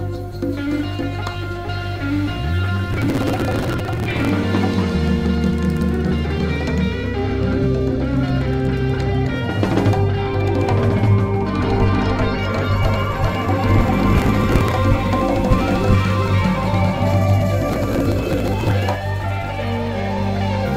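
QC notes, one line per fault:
2.93–4.29 s, 14.13–14.77 s and 17.72–18.71 s, processor overload crackle: the processor repeatedly falls behind its small audio buffers, which are around 3 ms each, and every missed buffer is simply skipped. The first run drops on the order of 150 buffers and the two later runs several dozen each. Each skip leaves a tiny hard-edged hole, and so many in a row make a gritty tearing crackle over the sound that stops as soon as the load clears.
11.63–18.95 s, doubled audio track: the likely cause is that the same audio is being mixed in a second time through a slower path. This copy trails by around 0.4 s at roughly the same level and the full bandwidth. It enters and leaves abruptly and has no decay or room colour, so the result is a dry, distinct repeat rather than reverb. The last two crackle bursts fall within this doubled stretch.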